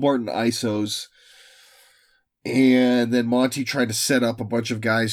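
No technical faults can be heard anywhere in the recording.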